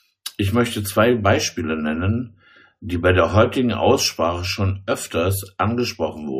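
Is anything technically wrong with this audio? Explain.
No, nothing in this speech recording stood out as a technical problem on listening.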